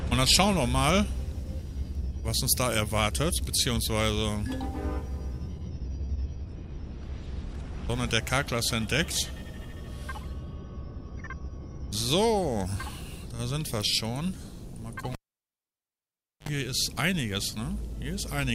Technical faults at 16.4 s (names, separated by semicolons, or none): cable pulled and plugged in